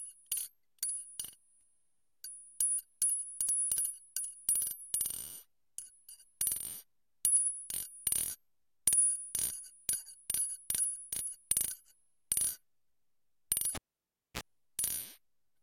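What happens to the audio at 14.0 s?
A live cable was pulled out and plugged back in, spanning 13.75 to 14.41 s. Disconnecting it gives a pop, and the sound then drops to near silence for about 0.61 s. On reinsertion, only the plug tip touches at first, so the ungrounded input picks up a 60 Hz mains buzz lasting 38 ms. A second pop follows as full contact is made and the sound returns.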